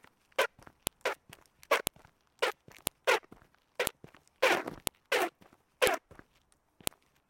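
File header played as audio at 0.87, 1.87, 2.87, 3.87, 4.87, 5.87 and 6.87 s in this everyday-sound recording: 1-second pieces were joined with their WAV headers intact, so those header bytes play as samples, giving a sharp, loud click once every second.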